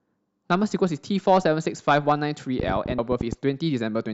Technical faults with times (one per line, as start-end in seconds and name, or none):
2.60-3.34 train of clicks
2.95-2.99 damaged data in a compressed stream